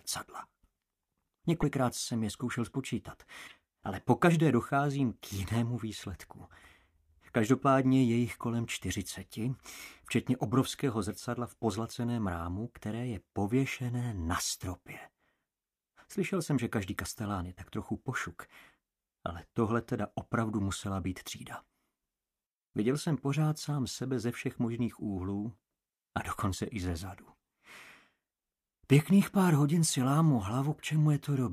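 At 1.61 to 1.64 s and again at 3.46 to 3.52 s the sound skips forward and the moments after each cut are briefly mis-decoded. The likely cause is a broken MP3 bit reservoir: frames were lost, so the next frame looked back for borrowed data and decoded bytes belonging to another frame. The lengths fit one and two frames of about 26 ms. A plain dropout only goes silent, but here the audio also jumps ahead.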